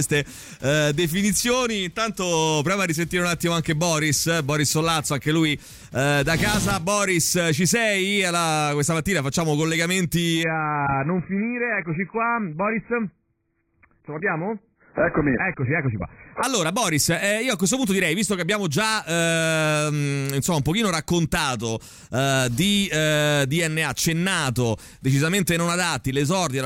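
From 10.43 to 16.43 s the adaptive stream drops to a lower bitrate as throughput falls. Content above 2.5 kHz vanishes and codec artefacts jump abruptly, with no gap.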